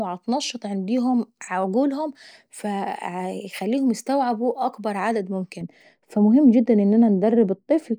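From 5.61 s to the end, just after "فبيخليهم يستعبوا اكبر عدد", de-emphasis was applied wrongly, cutting treble from speech that either had no pre-emphasis or had already been de-emphasised. The speech turns dull and muffled, about 11 dB down at 10 kHz. The slope is smooth, with no sharp cutoff as a low-pass filter would leave.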